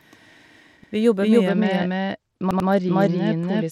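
Throughout the speech, a full-band copy runs around 300 ms behind at about equal level, with no decay or room colour: a doubled audio track, likely from a second, slower capture path. At 0.84 s, a repeated buffer replays a roughly 93 ms piece once, producing a hard-edged stutter that fits a 4096-sample buffer. From 1.48 s to the end, the treble dulls and gritty noise rises, which points to a Bluetooth SBC bit pool drop from 31 to 10, near 77 kbps. Within that stretch, a second repeated buffer between 2.51 s and 2.69 s plays the same piece three times in a row.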